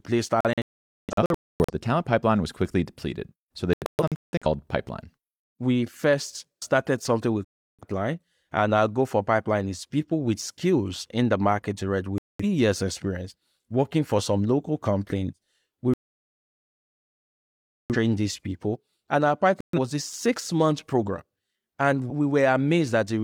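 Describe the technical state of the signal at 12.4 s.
At 12.4 s the speech is inside a digital broadcast dropout running from 12.18 to 12.44 s. The receiver stopped getting valid frames and muted its output, so the sound cuts or quickly fades to silence. About 213 ms of programme is lost, consistent with several consecutive frames failing.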